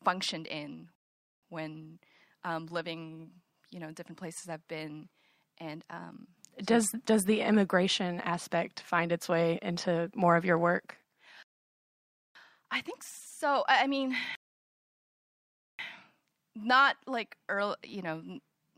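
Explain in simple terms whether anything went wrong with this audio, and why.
The speech freezes into silence three times, at 0.95–1.43 s, 11.43–12.35 s and 14.35–15.79 s, then picks up exactly where it stopped. That is a rebuffering stall: the player ran out of downloaded audio and waited. Unlike a dropout, nothing is skipped; the pauses only add time.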